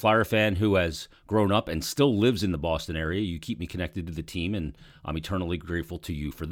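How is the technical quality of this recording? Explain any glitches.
No technical glitches can be heard anywhere in the recording, and the signal stays steady and intact throughout.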